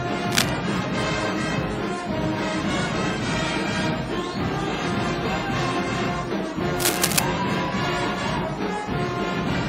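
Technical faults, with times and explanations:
0.32–0.49 s and 6.80–7.19 s, cable scratch noise: two bursts of dense, irregular crackle and rustle sit over the sound, the first lasting under a fifth of a second and the second about 0.4 s. Each is roughly as loud as the wanted signal. The likely cause is a worn cable, connector or control being moved, with its contact resistance fluctuating rapidly and adding that uneven noise.
5.55–5.59 s, compressed frames skipped: the audio jumps forward by about a tenth of a second, which fits roughly two missing frames of 46.4 ms each. Those frames were never decoded, either absent from the stream or rejected as corrupt.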